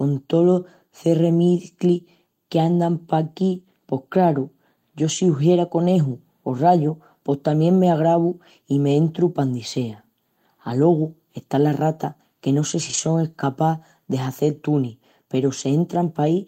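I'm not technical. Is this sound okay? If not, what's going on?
No, there is one brief fault. At about 12.89 to 12.99 s the speech turns rougher and noisier for a moment. This is a lost packet rebuilt from error correction. A few small chunks of the call's data went missing in transit, and the chunks that arrived next carried simplified backup copies. The receiving side played those backups, so nothing drops out, but that stretch sounds coarser, which fits roughly three lost packets.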